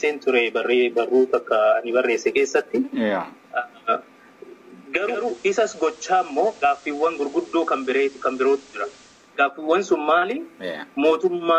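From 4.96 s to 9.38 s, digital radio blending to FM analogue: a 360 ms cross-fade brings hiss roughly 25 dB down and drops level about 2 dB.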